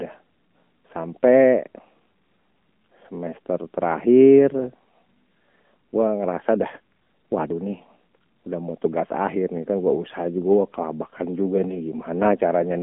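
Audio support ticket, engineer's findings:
AMR narrowband mobile codec, whole clip: speech band-limited to about 200 Hz to 3.4 kHz, buzzy synthetic pulse-excited texture, consistent with low-rate AMR-NB near 7.4 kbps.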